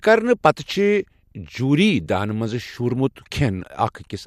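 Speech recording with no technical faults audible anywhere in the clip.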